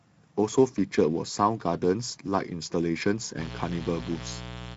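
Speex codec damage runs through the whole clip, and the amount of coding roughness fits a Speex mode near 16.8 kbps. Too few bits describe the excitation, so the speech sounds hoarse and noisy, and nothing survives above 7.8 kHz, while the top band above 4 kHz is only shaped noise fill.

Mains buzz enters at 3.35 s and lasts to the end. Sharp switching spikes on a 60 Hz supply repeat twice per cycle, spreading harmonics up into the kilohertz range. The result is a steady, raspy buzz sitting only about 10 dB below the speech.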